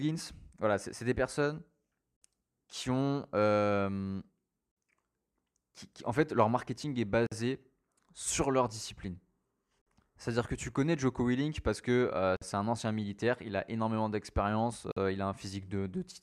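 Gap between chunks in this speech at 2.17, 4.72, 7.27, 9.82, 12.37 and 14.92 s: 50 ms silences after every 2.5 s chunk, where joins were left unfilled.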